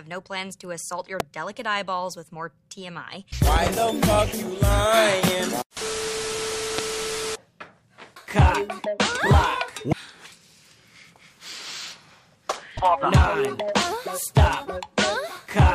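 A loud pop breaks through at 1.20–1.23 s, again at 5.28–5.30 s and at 6.78–6.81 s. Each is a single sharp crack, peaking about 15 dB above the sound. At 3.56–3.69 s there are two pops in quick succession, peaking about 10 dB above the sound. The sound carries on beneath every one. A brief voltage spike, likely from a switch, a plug or static, was added to the signal and shaped into a short thump.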